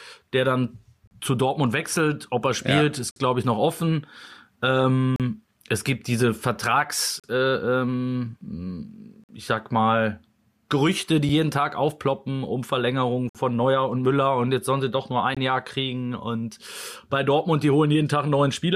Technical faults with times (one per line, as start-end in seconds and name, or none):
1.07-1.11 gap between stream segments
3.11-3.16 gap between stream segments
5.16-5.20 gap between stream segments
7.20-7.24 gap between stream segments
9.24-9.29 gap between stream segments
11.29 gap between stream segments
13.29-13.35 gap between stream segments
15.35 gap between stream segments